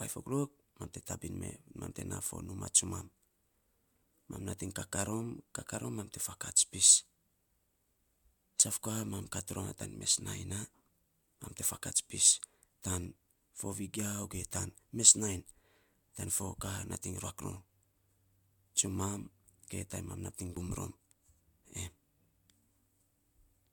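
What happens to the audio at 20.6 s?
At 20.57 s the speech jumps abruptly. About 40 ms is missing. This is likely a dropped buffer (overrun), with the surrounding audio joined directly.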